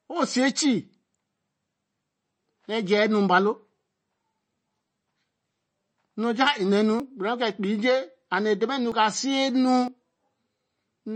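MP3 compression runs through the whole speech recording: the watery, swirly texture likely comes from a low bitrate near 31 kbps starving weak frequency lines. Dropped buffers (overrun) occur at 7.00 s and 8.92 s, each skipping about 20 ms, and at 9.88 s, skipping about 70 ms, with the audio jumping ahead without silence, likely because samples were overwritten before being collected.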